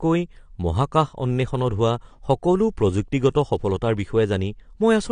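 Speech with nothing above 9.6 kHz throughout. It sounds dull and smeared, with plainly audible warble. This is likely AAC compression, at a bitrate that fits about 32 kbps.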